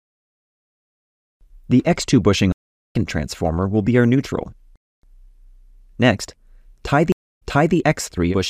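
Stream reconnects break the audio twice. At 2.52 to 2.96 s the sound drops out for 0.39 s and resumes roughly a third of a second further on, so a short stretch is skipped. At 7.12 to 7.75 s a 0.26 s silence is followed by a jump back of 0.37 s, repeating material just heard. In each case the connection failed, the player reconnected and restarted its decoder mid-stream, and the server resent a burst the second time.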